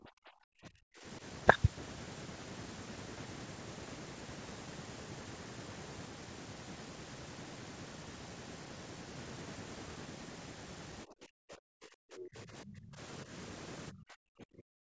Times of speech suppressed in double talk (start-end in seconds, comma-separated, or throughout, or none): 0.00-1.22, 11.04-12.99, 13.24-13.31, 13.91-14.83